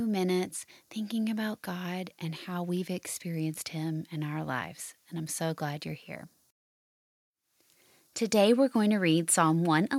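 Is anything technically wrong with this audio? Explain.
No, nothing is technically wrong with this audio. The speech has no fault that a careful listener would pick out.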